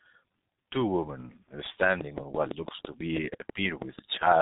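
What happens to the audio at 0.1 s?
At 0.1 s you're hearing the G.723.1 codec, and it isn't a momentary glitch: it runs through the whole clip. The codec chops the speech into 30 ms frames and rebuilds each one from a sparse voice model, which fits a bitrate of roughly 6 kbit/s. Nothing above 3.8 kHz survives, and the damage is heavy, so the voice comes across muffled and hoarse, with consonants smeared together.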